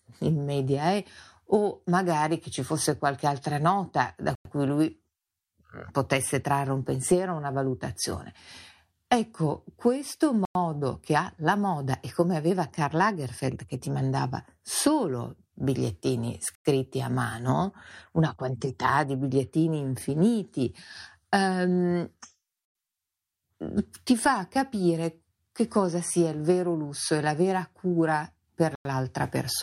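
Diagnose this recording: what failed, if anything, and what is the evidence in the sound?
The speech was delivered in chunks of about 6 s, and whatever joined them, at the storage or playback stage, left a gap between chunks instead of butting them together. Each join inserts 0.1 s of silence with hard edges: at 4.35 s (between "qualche altra nota da" and "cui lui"), at 10.45 s (just before "che ha la moda"), at 16.55 s, at 22.65 s (after "di bigliettini infiniti ehm"), and at 28.75 s. Nothing is lost, but the flow breaks on a strict 6.1-second grid.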